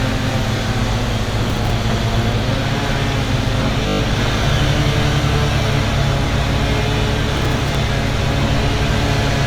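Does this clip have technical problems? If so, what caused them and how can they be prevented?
Yes. Repeated frames: at 0.56 to 0.59 s a 30 ms block of compressed data was played again, and at 3.87 to 4.00 s a 20 ms block repeated six more times. Each is heard as a stutter, adding 30 ms and 120 ms. Checking sequence numbers before writing or sending frames prevents this.

Processor overload crackle: at 1.50 to 1.71 s and 7.34 to 7.75 s, the processor missed run after run of short deadlines, about ten and then about twenty, with buffers around 10 ms long. Each miss replayed a scrap of old audio with hard edges, giving a gritty crackle over the sound. Larger buffers or less competing load during playback or recording prevent it.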